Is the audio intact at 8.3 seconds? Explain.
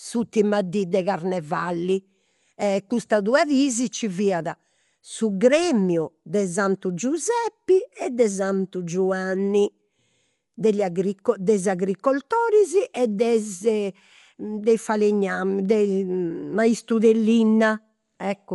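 No. At 8.3 seconds, as across the whole clip, the speech sounds dull and muffled, with a rough, fluttering grain around tonal parts and nothing above 11.4 kHz. This is likely Dolby Digital compression at a low bitrate, consistent with about 64 kbps. Short of bits, the encoder narrows the band and leaves many frequency lines without mantissa data. The decoder fills those lines with dither noise, producing that rough texture.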